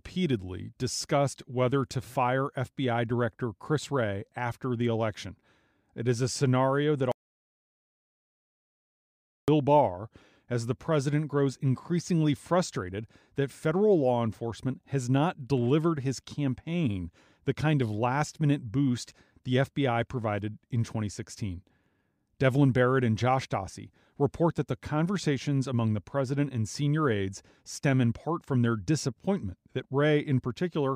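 At 7.12 s, right after "is a scenario that", the speech stops dead and the track falls into complete silence, with no room tone or hiss underneath, until it resumes abruptly at 9.48 s. This is an audio dropout to silence lasting about 2.36 s, and whatever was said in that span is simply gone. The likely cause is that the input feed was lost, from a disconnect, link failure or accidental mute, while recording carried on writing silence.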